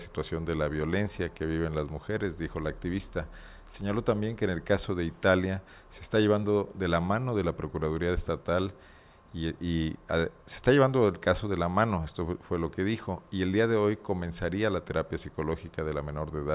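No dropouts, clipping, glitches or other technical faults turn up anywhere in the recording.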